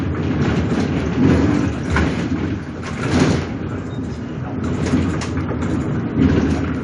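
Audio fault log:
Nothing stood out on listening to these sounds.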